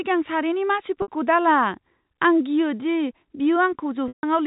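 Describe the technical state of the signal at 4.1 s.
Packet loss with pitch repetition spans 4.08 to 4.23 s: the receiver loops the last pitch period over the 150 ms gap, giving a brief buzzy hold that fades to silence before speech cross-fades back.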